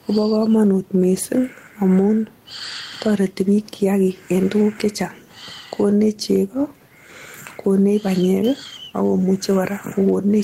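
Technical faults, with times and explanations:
Throughout, gain pumping: the gain swings by around 10 dB, pulling down on each loud passage, squashing the dynamics, likely from excessive input gain with a fast limiter. The waveform envelope looks flattened.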